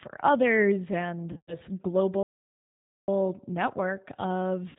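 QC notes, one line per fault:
Throughout: G.729 codec. Speech is rebuilt at 8 kbit/s from a vocal tract filter, a pitch predictor and a few pulses per 5 ms subframe, so the sound is intelligible but rough and slightly synthetic. The damage is plainly audible. On a spectrogram, energy stops sharply at 4 kHz with nothing above it, and harmonics look smeared and grainy. The waveform looks smoother and less detailed than a wideband original would.
1.32–1.57 s and 4.69–4.77 s: VoIP packet loss concealed by the speech codec. Just after "others and", about 140 ms of audio is missing, scattered over 160 ms with a longest gap of 100 ms. That fits roughly seven lost 20 ms packets. Near the end, about 60 ms is missing, which fits three packets. The decoder repeats its last pitch and filter at falling gain, so the sound turns into a fading buzzy tone or coloured noise. It stays weak for a moment after data resumes. 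On a spectrogram, flat, overly regular harmonic streaks fade out, and the waveform envelope decays step by step.
2.23–3.08 s: playback stall. The output goes completely silent for about 0.85 s in mid-flow, then resumes. The likely cause is the player running out of buffered data or its thread being blocked. The waveform shows an abrupt drop to a flat line with a hard edge at both ends. On a spectrogram, it appears as a clean vertical blank band across all frequencies, with no gradual fade on either side.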